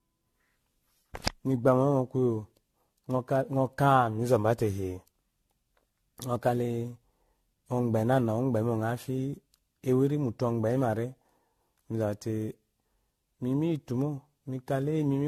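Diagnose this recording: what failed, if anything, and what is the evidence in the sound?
Codec stage: the speech sounds swirly, hollow and smeared throughout, which points to generation loss from roughly seven passes through a 64 kbit/s AAC-LC chain, each requantising on a shifted frame grid. The spectrogram would likely show speckled spectral holes and blurred, soft-edged attacks.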